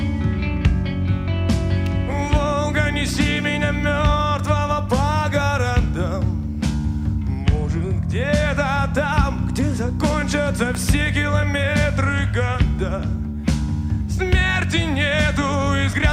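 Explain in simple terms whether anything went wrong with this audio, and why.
Two sharp snaps sit on top of the sound at 1.86 s and 10.75 s, the second one louder. Each is an electrical switching spike, most likely a nearby switch or static discharge. Unlike a dropout, nothing goes missing; the sound carries on underneath.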